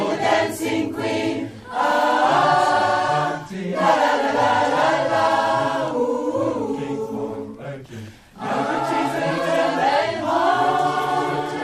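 No technical faults are audible.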